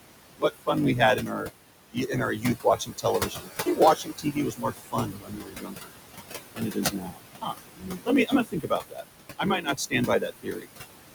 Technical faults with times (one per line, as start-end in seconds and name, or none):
0.00-11.15 block size mismatch (truncated)
0.00-11.15 noise suppressor artifacts
1.16-1.50 speech cut by the noise suppressor
1.92-5.93 speech cut by the noise suppressor
6.54-9.03 speech cut by the noise suppressor
9.38-10.68 speech cut by the noise suppressor